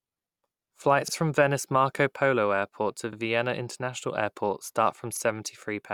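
Overlapping chunks at 1.08 to 1.13 s, 3.13 to 3.17 s and 5.17 to 5.21 s: the speech was handled in 2.0 s chunks that each begin 44 ms before the previous one ends, so that sliver plays twice at every join, giving a brief stutter-click at regular intervals.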